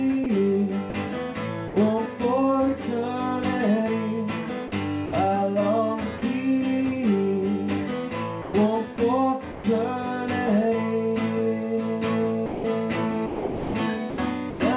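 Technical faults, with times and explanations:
0.24–1.76 s, 4.68–5.12 s, 8.42–9.64 s and 12.46–14.6 s, sound chopped by the voice detector: the sound keeps cutting in and out, with about 140, 100, 260 and 840 ms swapped for comfort noise. The likely cause is the sender's voice detector repeatedly switching transmission off and on.
6.18–6.22 s, sound dropped by the voice detector: a 40 ms bit of sound vanishes into steady comfort noise, then returns. The sender's detector likely mistook quieter material for background and briefly stopped sending, with the hiss itself band-limited to 4 kHz by the call path.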